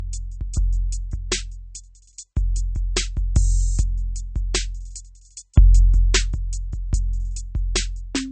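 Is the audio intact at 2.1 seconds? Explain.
No. At 2.1 seconds, as throughout the music, this is low-bitrate audio saved at a high bitrate: likely a 32 kbit/s MP3 re-encoded at a higher rate, which cannot restore what was discarded. Nothing sounds above 8.4 kHz, leaving the top end dull and muffled.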